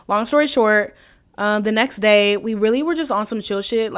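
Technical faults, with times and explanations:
No technical faults are audible anywhere in the speech.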